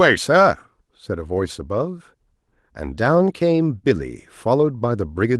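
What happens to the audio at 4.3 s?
Nothing goes wrong at 4.3 s: the speech carries on intact, with only the light, steady character of its Opus voice compression.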